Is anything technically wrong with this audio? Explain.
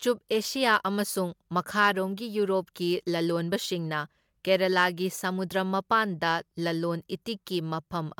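Yes. The speech crackles on its loudest moments in two places, from 1.81 to 1.89 s and again from 4.53 to 4.85 s. This is hard clipping. In both spans the signal was driven about 2 dB past what a stage in the chain could pass, so the tops of the waveform were cut flat instead of rounding over. Those flattened peaks add harmonics high in the spectrum, which is why the loud moments crackle.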